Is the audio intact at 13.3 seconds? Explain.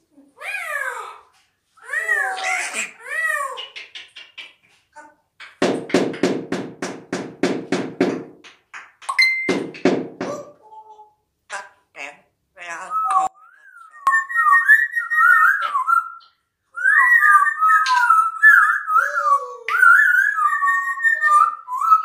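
No. From 13.27 to 14.07 s the sound collapses by about 31 dB, leaving only a faint residue. The likely cause is one channel inverted: with one stereo channel's polarity reversed, everything common to both sides cancels when they are summed to mono, and only their small difference survives. Unlike a dropout, which goes fully silent, a faint trace remains.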